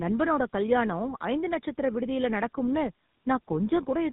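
Speech running through two speech codecs in tandem for its whole length, with nothing above 3.8 kHz. The roughness and warble sound compounded, which fits AMR-NB then GSM full rate across a G.711 link, rather than the milder, single-stage artefacts of one low-rate codec.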